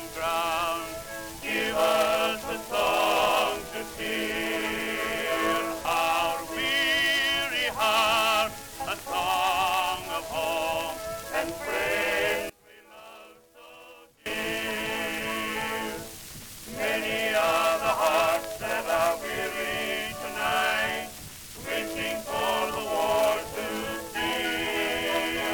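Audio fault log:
12.50–14.26 s, one channel inverted: for just under two seconds the level collapses by about 23 dB, and the shared sound nearly vanishes. This is likely caused by one stereo channel flipping polarity, so that when the two channels are summed to mono, everything they share cancels. Only the small difference between left and right survives, leaving a faint residue until normal polarity returns.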